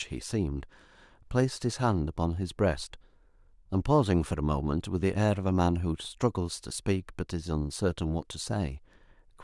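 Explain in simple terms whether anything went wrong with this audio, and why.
Nothing went wrong here: the speech runs without any audible dropout, glitch, distortion or interruption.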